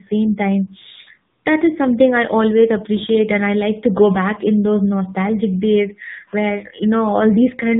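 From start to finish the speech shows tandem speech coding: two speech coders in series, consistent with G.726 followed by low-rate AMR-NB, each coding the already degraded output of the one before. Nothing is present above 3.8 kHz, and the sound is rough, muffled and warbly.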